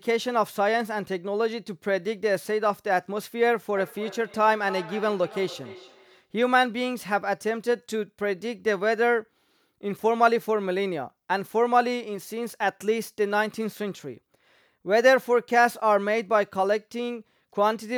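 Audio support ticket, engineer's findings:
Feedback echo between two devices, 3.77 to 6.31 s. Speech returns about every third of a second, each pass thinner and more ringing. Loudest repeat about 16 dB below speech. Probable component: a second device in the room replaying the call. Its sound re-enters this microphone, and neither canceller removes it.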